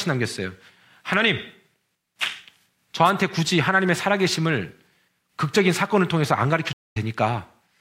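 At 3.05 s, lasting only about 50 ms to 3.10 s, a wireless microphone noise hit breaks through: a brief swish of static rising over the speech. The radio link from an analogue FM microphone dipped as reflected signals cancelled, letting receiver noise surge into the audio. Unlike a digital dropout, the sound is not cut to silence; hiss is added on top of the speech, and it clears as the signal recovers.

From 6.73 s to 6.97 s a stream reconnect occurs. The connection broke, leaving about 227 ms of silence, and playback restarts with a fresh decoder. The speech resumes roughly 150 ms further on, so a small stretch is skipped, and the first frame comes back fading in. That skip is what separates it from a simple gap. A buffer underrun would pick up where it left off, with nothing missing.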